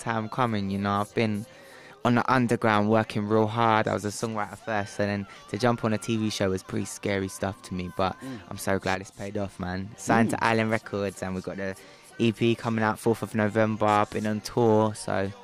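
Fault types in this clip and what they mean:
Sudden gain jump: at 8.95 s the level drops by about 6 dB in a single step and returns at 9.35 s. This is likely a gain change applied without a ramp. The background noise steps down with the sound, unlike a fade or compressor, which moves gradually.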